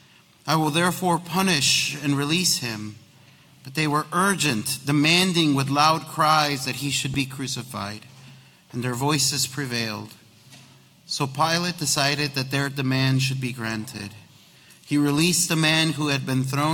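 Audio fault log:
7.14 s, repeated buffer: a tiny slice of sound, about 2.67 ms long, plays three times back to back, because fresh audio failed to reach the output in time and the device replayed its last block twice more. Each repeat meets the next with a hard join, and with a piece this short the whole event is heard as a single click or brief buzz. The length fits a 128-sample buffer, and nothing seems to be lost after it.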